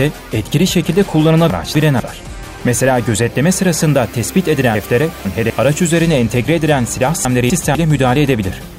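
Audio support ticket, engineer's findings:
Chunks out of order at 1.5–2.0 s, 4.75–5.5 s, 7.25–7.75 s. 250 ms blocks replayed late, one block late at the first and last, two at the middle. Jumbled. Unlike a dropout, no audio is missing. Likely buffer or write sequencing.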